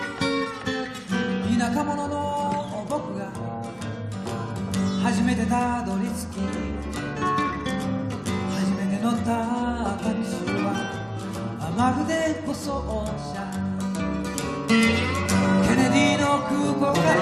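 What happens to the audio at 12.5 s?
At 12.50 s the audio briefly jumps forward: compressed frames are skipped. A frame or more of the encoded stream never reaches the output, either missing or rejected by the decoder as damaged, so about 20 ms of sound vanishes, which fits a short codec frame. The join is heard as a brief glitch where the sound jumps ahead. On a spectrogram this shows as a thin vertical seam where the texture shifts abruptly. The waveform shows a discontinuity at the join.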